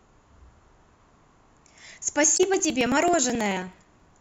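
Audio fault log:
2.24–4.11 s, periodic USB or driver dropouts: something's blocking the bus every 54 ms, skipping about 10 ms each time, so you get around forty regular ticks.
2.34–2.41 s, damaged data in the compressed stream: bad frames there throw the decoder off sync, and it hunts for the next header.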